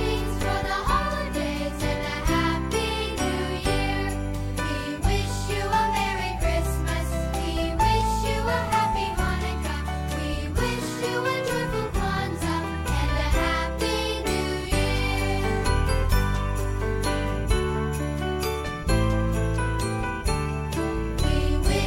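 At 0.41 to 0.44 s, chunks play out of order. One 10 ms chunk arrives two chunks late. The three hard joins cause a brief jumbled stutter.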